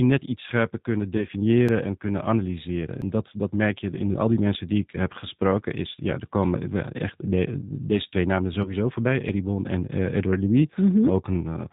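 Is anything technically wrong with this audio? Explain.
Yes. G.729 codec, throughout: the speech is rebuilt at 8 kbit/s from a filter, pitch predictor and sparse pulses, so nothing above 4 kHz survives and it sounds rough and synthetic.

VoIP packet loss concealed by the speech codec, at 1.17 to 1.26 s after "net iets scherper kunnen" and at 8.62 to 8.74 s after "de deze twee namen": about 20 ms went missing each time. The decoder stretched its last frame into a fading sound, and the voice stays weak briefly afterward.

Small skips in the sound at 1.69, 3.02 (between "en kunnen analyseren" and "dat dat merk je") and 9.29 s, each dropping roughly 10 ms, are likely a dropped buffer (overrun), with samples overwritten before being read.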